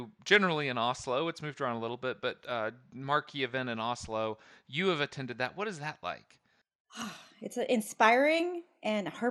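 Speech runs dull and muffled from start to finish, with a gurgling, granular roughness as the upper range flickers in and out. The likely cause is MP2 compression starved of bits, consistent with roughly 80 kbps, dropping whole high sub-bands and coarsely quantising the rest.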